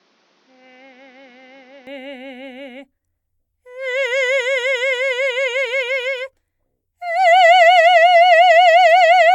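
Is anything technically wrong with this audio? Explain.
Yes. From 0.0 to 1.87 s the music comes through what sounds like an input switched to a poorer device, likely a lesser microphone or headset. Its band stops at 6.8 kHz, so it sounds dull. The level is about 10 dB lower, with faint new noise about 40 dB down. It clears at 1.87 s without a gap.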